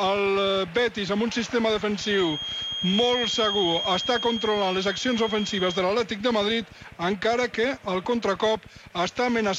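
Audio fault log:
1.92 to 5.88 s, feedback whistle. A thin, steady tone near 3.2 kHz sits a little below the sound, swelling and fading slowly in level. It likely comes from a loudspeaker-to-microphone loop held just at the edge of feedback. One frequency rings on without building.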